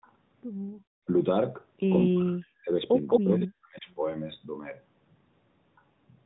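At 0.71 s the room background briefly drops by about 31 dB for roughly 70 ms. That's background gated by the echo canceller, which clamped the mic while the far end played. From 2.11 to 2.72 s and again from 3.19 to 3.88 s, the speech dips hard, by roughly 40 dB at worst, and breaks up in pieces. That's likely speech suppressed in double talk, with the canceller ducking the talker along with the echo.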